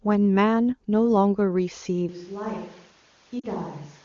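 At 2.09 s the sound turns roomy and hollow, and it stays that way to the end. The bass thins out. The level drops by about 10 dB. Background noise rises to roughly 25 dB below the speech. This is a switch to a distant microphone. The likely cause is that the close microphone's signal failed or was dropped, leaving a mic further back, such as a camera's. The change is abrupt, with no fade.

From 3.39 to 3.46 s there is a short break of about 40 ms. The sound drops to near silence, then resumes a little rough. These are lost AMR speech frames. Radio errors corrupted the frames, so the decoder repeated the last good settings with falling gain. The 40 ms gap fits two 20 ms frames. The wideband AMR sound around it stays clear, which points to a high AMR-WB rate.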